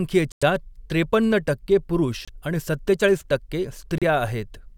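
The speech drops out cold three times: from 0.32 to 0.43 s with about 96 ms of dead silence, then from 2.25 to 2.29 s for 26 ms, and from 3.98 to 4.03 s for 34 ms. Each gap has no fade, and the talking just resumes. That's the signature of a Bluetooth stall, likely interference holding packets back until the headphones' buffer emptied, so playback sat idle until the retransmissions caught up.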